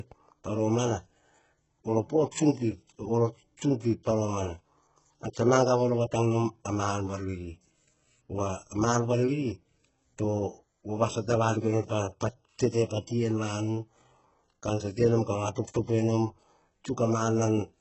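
Speech coded at a very low bitrate, likely HE-AAC compression around 8 kbps, has its treble rebuilt by band replication: throughout, s sounds turn gritty and metallic, with nothing above about 7.9 kHz.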